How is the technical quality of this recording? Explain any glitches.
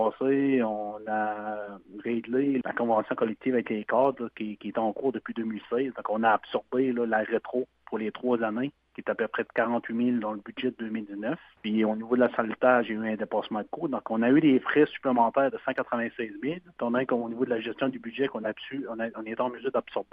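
No technical glitches can be heard anywhere in the recording. There is nothing in it that needs explaining.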